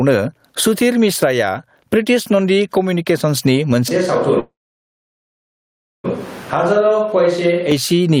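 Gain pumping runs through the whole clip, with a gain swing of roughly 20 dB. The likely cause is gain set far too high, with a fast limiter clamping down on each peak and flattening the dynamics.

A switch to a distant microphone comes at 3.89 s and lasts until 7.72 s. The speech abruptly turns roomy and hollow, thinner in the bass, about 10 dB quieter, with background noise more prominent. This likely means the close microphone dropped out and a farther one took over, and the return at 7.72 s is equally sudden.

A call audio freeze interrupts from 4.39 s to 6.06 s. The last sound trails off as a brief fading buzz or hiss, then about 1.5 s of near silence, and the speech resumes exactly where it stopped, so a 1.6 s gap is inserted with nothing lost. Delayed packets likely emptied the receiver's jitter buffer.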